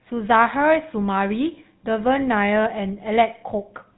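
From start to end, GSM full-rate codec damage: nothing above about 3.9 kHz, and a buzzy, gravelly roughness from pulse-driven excitation, consistent with a 13 kbps stream.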